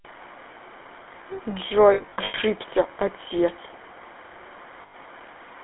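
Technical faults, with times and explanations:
Throughout: GSM full-rate codec. The speech has a buzzy, gravelly roughness, typical of pulse-excited vocal-tract coding at 13 kbps. It sits in a 300 Hz to 3.4 kHz band.
1.94 to 2.36 s: lost GSM frames. About 260 ms drops out in scattered gaps, the longest roughly a tenth of a second. Each gap holds a rough, metallic ring from the last good frame.
4.82 to 4.95 s: lost GSM frames. A 120 ms gap is filled by repeating the previous frame. It sounds like a brief metallic smear.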